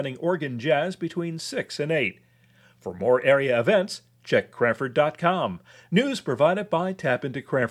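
No faults are audible anywhere in this speech recording, so there is nothing to report by time or cause.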